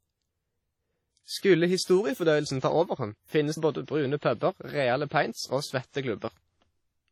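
From start to end, the speech carries heavy transform-codec damage, likely from WMA compression at a low bitrate, which fits about 32 kbps. Quantisation noise smears across long blocks. Weak detail drops out. The result rings and sounds washy, with hiss breathing alongside the voice. Nothing remains above 17.6 kHz.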